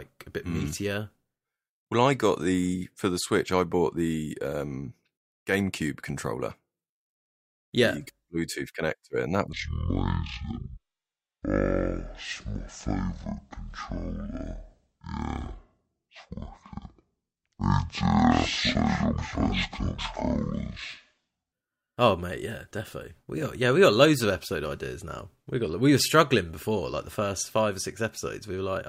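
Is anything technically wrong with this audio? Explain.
Yes. Stereo read as mono, 9.53 to 21.53 s after "connector and that": interleaved left and right samples played as one channel, so the speech runs at half speed, an octave low.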